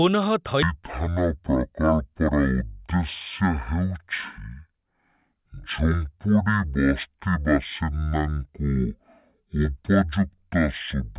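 From 0.63 s to the end, the speech has a wrong sample rate. It is played at half the speed it was captured at, with no conversion. This fits a 16 kHz recording played at 8 kHz. Everything runs slow and drops a full octave, so voices sound deep and dragging.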